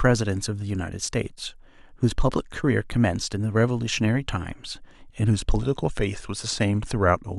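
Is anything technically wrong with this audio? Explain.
Yes. A drift correction step occurs from 5.30 to 7.34 s. The speech suddenly slows by about 5.5 percent, and its pitch drops by about 97 cents, close to a semitone. Speed and pitch move together, so the voice sounds detuned and dragged. The likely cause is clock-matching software changing the playback rate in one step to manage its buffer. The shift lasts until 7.34 s.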